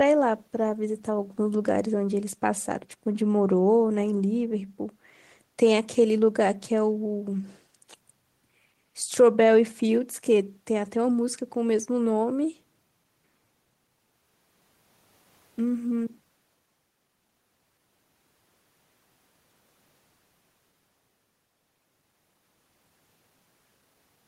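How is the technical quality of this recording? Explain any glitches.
Nothing here sounds like a glitch to my ear, so there's nothing to explain.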